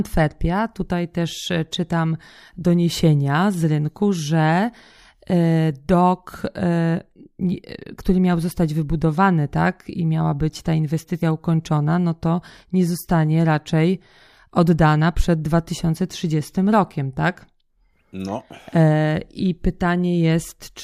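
At 11.22 s, between "i miała być ta" and "ukończona no to nie", the speech loses a short stretch to compressed frames skipped. A couple of frames, probably 32 ms each and roughly 70 ms in all, were never decoded, so the audio jumps forward. A spectrogram shows a sudden discontinuity in the harmonics. The waveform splices without a gap.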